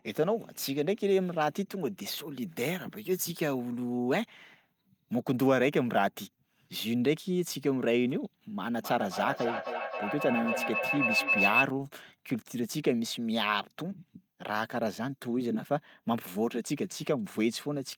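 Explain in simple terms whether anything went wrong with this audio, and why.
Something did go wrong: there's a feedback howl from 8.78 to 11.7 s. It sounds like two devices in the same room were on the call, so one's loudspeaker fed the other's microphone and the sound kept looping round, getting stronger each pass. It narrows into a high whistle around 3 kHz, pulsing roughly every third of a second, and gets about as loud as the speech before the loop breaks.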